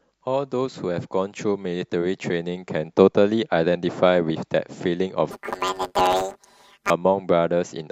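From 5.31 to 6.90 s, planar audio read as interleaved turns 10 ms blocks into a 100 Hz robotic buzz, seen as evenly spaced vertical striations on the spectrogram.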